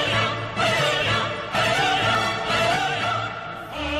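An overlap between stream segments occurs at 2.15 s, where two segments, each about 2 s long, carry overlapping time stamps. The player trims the shared span from audio that was never duplicated, so a few milliseconds disappear and the waveform jumps, heard as a tiny skip.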